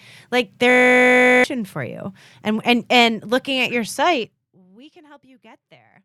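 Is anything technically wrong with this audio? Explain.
Yes. From 0.70 to 1.44 s the speech gives way to a system hang loop: the playback system froze while the hardware kept replaying one 20 ms piece of its buffer, producing a steady 50 Hz buzz. About 0.7 s of speech is lost. Unlike mains hum, it replaces the speech entirely and stops abruptly.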